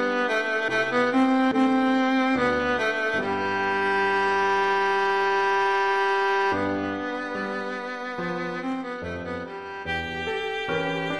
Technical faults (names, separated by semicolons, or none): none